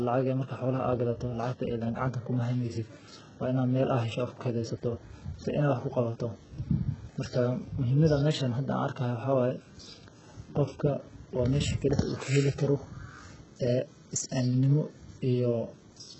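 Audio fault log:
throughout, sample clock jitter: timing wobble of roughly half a microsecond adds a faint roughness, about 45 dB below the speech, that grows on loud, bright sounds and disappears in pauses.
throughout, HE-AAC compression: heavy damage, with nothing above 8 kHz and a gritty, lispy top end from rebuilt treble, likely from HE-AAC at a very low bitrate around 8 kbps.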